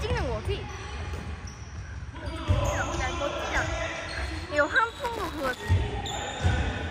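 From 4.89 to 5.69 s there is buffer tearing: the write and read positions of the playback ring buffer cross inside each period, so a small slice of every buffer repeats audio about 10 ms old between hard joins. This produces a rattling 188 Hz buzz, which fits a 256-sample buffer.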